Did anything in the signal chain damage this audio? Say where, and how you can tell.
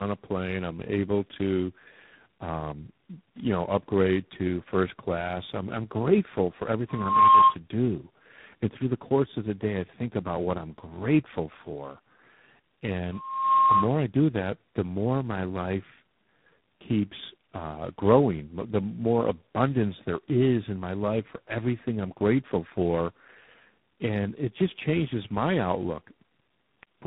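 Yes. Tandem speech coding at the codec stage runs through all of it: the speech sounds rough, muffled and warbly, and the spectrogram shows a hard ceiling near 3.8 kHz with smeared formants. The sound points to several speech coders in a row, likely ending in G.726, each re-encoding the previous coder's damaged output.

A loudspeaker feedback squeal comes from the acoustic loop at the playback end, between 6.88 and 7.56 s. A 1.1 kHz tone swells over less than half a second to about 10 dB above the speech. The spectrogram shows a single brightening horizontal line, and the waveform's envelope balloons there.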